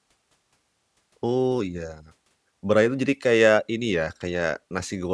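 Nothing here trips a technical fault, so there's nothing to walk through.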